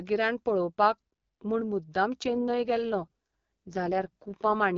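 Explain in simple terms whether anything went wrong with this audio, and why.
Something did go wrong, from about 2.25 s to 4.55 s. The speech, carried over an HD Voice phone call, suddenly turns rougher and more buzzy and robotic. This is an AMR rate drop: the phone network, struggling with a weak signal, told the codec to describe the voice with fewer details so more could go to protecting against errors. Unlike a dropout, nothing goes silent, and unlike a switch to an older narrowband call, the voice doesn't sound muffled or thinner.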